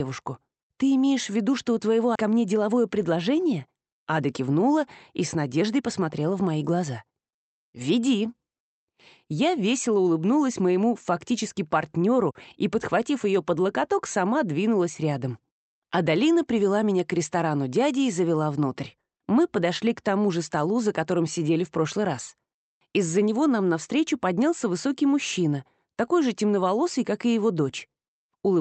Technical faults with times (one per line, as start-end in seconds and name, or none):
2.15-2.17 skip ahead
2.25-4.78 jitter buffer speed-up
5.36-5.88 jitter buffer speed-up